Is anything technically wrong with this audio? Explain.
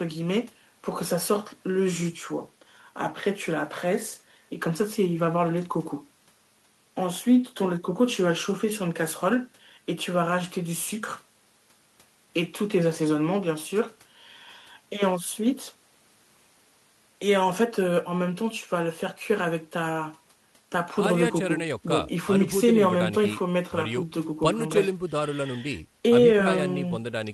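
No, nothing technically wrong can be heard in this speech recording.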